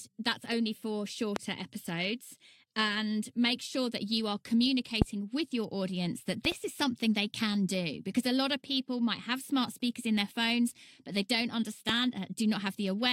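A loud pop sounds at 1.36 to 1.39 s, right after "that's only for", and again at 5.02 to 5.04 s, just before "with your audience that", each one pulse around 20 dB above the speech. At 6.45 to 6.54 s, between "with your audience that" and "is something they can", two pops land in quick succession, around 10 dB above the speech. A last single pop at 11.89 to 11.92 s stands around 15 dB above it. Each is likely a voltage step from a plug, switch, static or driver glitch, shaped by the circuits after it into a sharp thump. Unlike a dropout or a click from a gap in the audio, the speech carries on unbroken underneath.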